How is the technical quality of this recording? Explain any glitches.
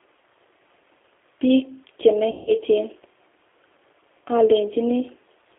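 The recording has two problems: the whole clip is band-limited and roughened by low-bitrate speech coding, and there is one concealed dropout near the middle.

The G.729 codec is present throughout. The speech sounds thin, slightly rough and synthetic, confined to roughly 300 Hz to 3.5 kHz with nothing above. This comes from a model-based coder, which fits an 8 kbit/s G.729A stream. It sends a vocal-tract filter, a pitch predictor and a few pulses per short frame rather than the waveform, so the fine detail is rebuilt rather than carried.

VoIP packet loss concealed by the speech codec occurs from 2.31 to 2.54 s. The speech smears into a buzzy tone or coloured noise that fades, then comes back weak and distorted. About 160 ms of audio went missing, which fits eight 20 ms packets. The decoder filled the gap by repeating its last pitch and filter with falling gain. Because each frame builds on the previous one, the damage lingers briefly after real packets resume.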